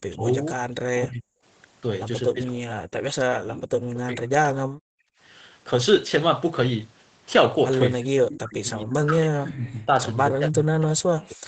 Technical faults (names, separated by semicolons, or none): speech suppressed in double talk